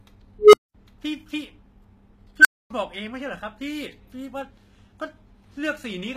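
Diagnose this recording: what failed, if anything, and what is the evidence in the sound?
The whole clip sounds like it went through a codec, likely HE-AAC compression at a low rate, something around 20 kbps. The damage is plainly audible. The treble stays bright, reaching up to about 21.3 kHz, but it's rebuilt rather than real. The codec keeps only the lower band and copies it upward under a rough envelope, so the top end doesn't line up harmonically with the speech underneath and sibilants come out gritty and metallic.

Twice there's an unstable filter in the processing chain, probably in the call-processing or DSP stage. At 0.39 s a tone somewhere around 400 Hz swells over about 144 ms, runs to clipping until 0.74 s, then drops into roughly 213 ms of silence. At 2.39 s a higher squeal near 1.5 kHz builds in just 54 ms, blows up until 2.70 s, then goes silent for about 256 ms. That's a recursive filter with bad coefficients running away until its numbers overflow and it resets.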